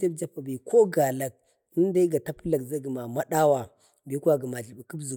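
No technical faults can be heard anywhere in the recording. Nothing in the speech calls for comment on technical grounds.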